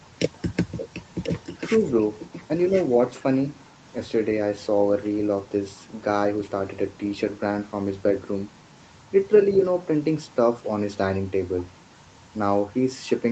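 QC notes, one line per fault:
0.77–2.95 s, echo leak: the far end's echo canceller likely failed to remove its loudspeaker pickup and sent it back, so a delayed copy of the speech arrives about 1.04 s late, roughly 10 dB quieter, trailing the direct sound.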